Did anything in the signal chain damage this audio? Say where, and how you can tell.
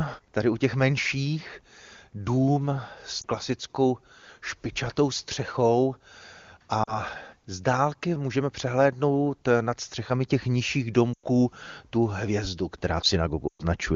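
Yes. There are brief dropouts where the speech smears and sags. Short dips come at 3.21 s, just after "těch menších dům s", and at 6.83 s, before "z dálky můžeme přehlédnout". Longer fades to near silence come at 11.13 s, after "nad střechami těch nižších", and at 13.48 s, each lasting about 0.1 s. These are lost AMR speech frames on the radio link. Corrupted frames failed their checks, so the wideband decoder repeated the last good pitch and vocal-tract settings with falling gain.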